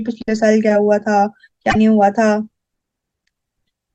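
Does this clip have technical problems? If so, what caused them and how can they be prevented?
Yes. From 1.67 to 1.76 s the speech breaks up, the sign of damaged data in a compressed stream. Corrupted bytes there make the decoder misread its frames and lose sync, so it emits garbled output until it finds the next valid frame header. Checksummed storage and transfer with verification prevent it.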